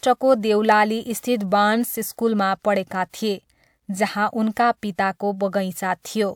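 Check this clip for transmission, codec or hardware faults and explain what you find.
Checking the clip turns up no faults to explain.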